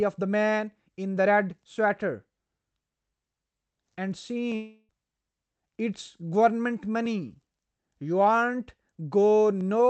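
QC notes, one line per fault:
4.55 to 4.91 s, long network dropout: the speech smears into a fading buzz for about a third of a second, goes silent briefly, then resumes with about 340 ms missing. The receiver is stretching the last sound while packets were likely lost.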